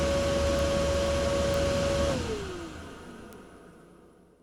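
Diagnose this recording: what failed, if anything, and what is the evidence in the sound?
Word clock ticks point to a failure on the digital link: the receiver runs on its own clock rather than locking to the sender's. From 0.11 to 4.40 s, ticks recur roughly every tenth of a second, some forty in total. Each marks a single sample dropped or repeated as the clocks slip, which fits a mismatch of around 200 ppm.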